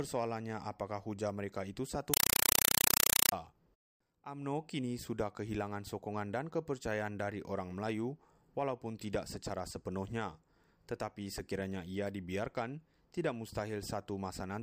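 From 2.14 to 3.32 s, an undecoded Dolby Digital bitstream reaches the output as a compressed stream played as audio, consistent with a 192 kbps AC-3 stream. Each frame becomes a 4 ms noise burst then silence, 31.25 times a second: very loud, chattering static replacing the sound.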